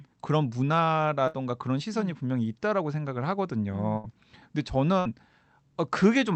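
At 1.27 to 1.36 s, 3.97 to 4.07 s and 5.00 to 5.08 s the speech briefly freezes into a fading held buzz or hiss, then jumps ahead. Each is a burst of packet loss: about 60 ms was concealed by stretching the last sound, and about 60 ms of speech was skipped.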